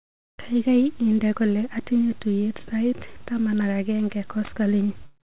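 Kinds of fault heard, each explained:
Sound dropped by the voice detector: likely the sender's detector judged the sound as background after "inde kole atinye tuiyet", swapping about 20 ms for comfort noise; spectrogram shows a brief flat noise patch.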